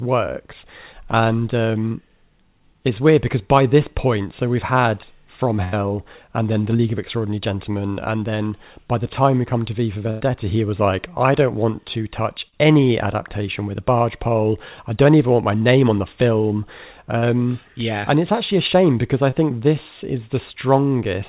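Speech, carried over a WebRTC call path whose band stops at 4 kHz, consistent with G.711 A-law at 64 kbps, has two bursts of packet loss at 5.64–5.75 s and 10.10–10.22 s. At each, the receiver stretches the last sound for 85 and 96 ms as a fading buzz or hiss, then resumes about 80 and 100 ms further on with that stretch of speech gone. Short concealed packet loss appears at 6.77–6.80 s, 12.48–12.54 s, 17.18–17.24 s and 19.30–19.34 s: 20 to 40 ms of audio never arrived, and the synthesized fill heard there comes across as a brief smear or wobble where short sounds can drop out.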